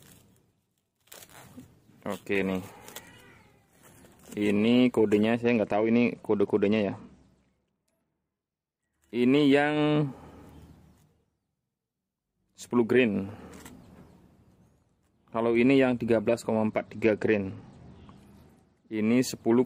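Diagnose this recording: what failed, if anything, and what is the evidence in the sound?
Twice the treble goes dull and a gritty, grainy noise rises under the sound: from 5.42 to 8.93 s and again from 16.68 to 18.93 s, with full brightness returning after each stretch. This is a Bluetooth SBC bit pool drop at the codec stage. When the wireless link congests, the sender lowers the SBC bit pool to keep audio flowing. The top sub-bands then get few or no bits, and the remaining bands are quantised coarsely. The dulling fits a drop from a bit pool near 28 to about 11, roughly 90 kbps, until the link recovers.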